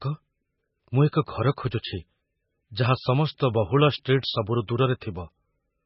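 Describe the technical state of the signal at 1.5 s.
At 1.5 s the speech carries heavy MP3 compression damage, present across the whole clip rather than just this moment. Everything above 5.5 kHz is gone, so sibilants sound dull and the voice takes on a watery, swirling texture with metallic chirps, which fits a very low bitrate near 16 kbps as the likely cause. On a spectrogram the energy stops at a flat ceiling around 5.5 kHz, with patchy gaps below where weak frequency lines flicker on and off between frames.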